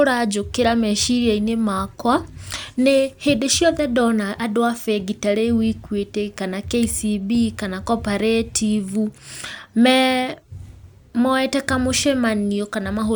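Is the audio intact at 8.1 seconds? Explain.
Yes, the speech at 8.1 seconds runs intact, with no dropout, click, distortion or other technical fault at that point.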